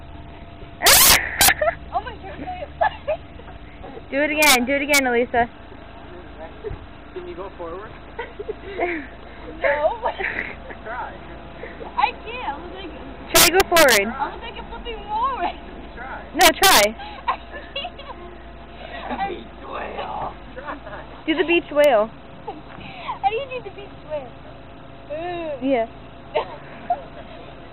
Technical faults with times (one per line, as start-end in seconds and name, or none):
0.86-1.49 integer overflow
4.43-4.55 integer overflow
4.94-4.99 integer overflow
13.35-13.97 integer overflow
16.41-16.84 integer overflow
21.84 integer overflow